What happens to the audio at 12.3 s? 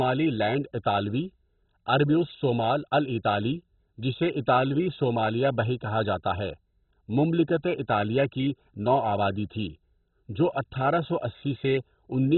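At 12.3 s the speech still carries the heavy degradation heard across the whole clip, most likely MP2 compression. Its sub-bands are starved of bits, so nothing remains above 4.1 kHz and the surviving bands are coarsely quantised, giving a dull, gurgling, granular sound that fits a 16 kbps stream.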